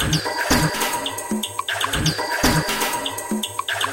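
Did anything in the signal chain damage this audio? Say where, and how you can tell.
Yes: compressed frames skipped at 0.73 s, a codec-stage fault. Roughly three 23.2 ms frames were dropped, so the sound jumps ahead about 70 ms.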